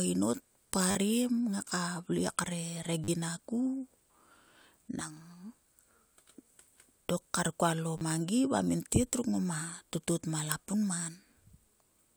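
Speech with three repeated-buffer events, at 0.91–0.95 s, 3.04–3.08 s, and 7.98–8.01 s, the last between "dok kar kualo" and "mangi va". Each time, fresh audio missed its deadline and the device replayed the previous short block several times in a row. The repeats, which fit a 10 ms buffer, join hard and are heard as a brief buzzy stutter. The speech that should have played there, about 30–40 ms each time, is lost.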